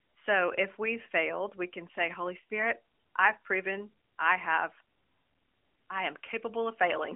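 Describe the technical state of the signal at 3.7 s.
At 3.7 s the audio is intact. It carries only the expected sound of a narrowband mobile line, with nothing above about 3.6 kHz and no fault at that moment.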